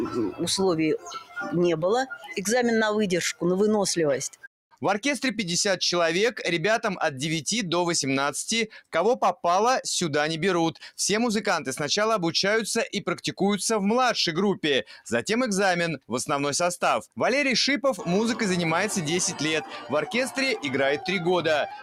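A noise suppressor applied to music or sounds runs throughout. It treats sustained material as noise, so the level swings by about 5 dB and tails thin out. Sound cut by the noise suppressor occurs at 0.98–1.37 s, 2.13–2.31 s, 4.29–4.47 s and 8.76–8.94 s, with held portions sinking by about 13, 11, 18 and 18 dB respectively.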